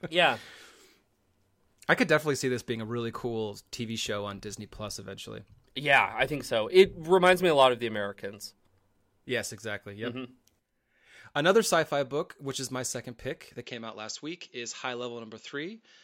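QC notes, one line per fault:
13.63–16.03 s, input switched to a poorer device: after "my second pick that" everything above 7.6 kHz drops out, no gap, likely a mic swap.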